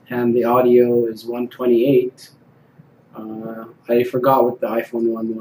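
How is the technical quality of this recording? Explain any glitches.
No glitches are audible anywhere in this recording, so there is nothing to explain.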